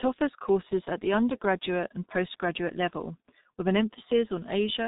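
From start to finish the speech carries heavy G.723.1 codec damage: nothing above 3.8 kHz survives, and the slow, coarse voice model leaves it muffled and hoarse with smeared consonants, which fits a rate near 6 kbit/s. A simple narrowband filter would sound dull yet clean, without this roughness.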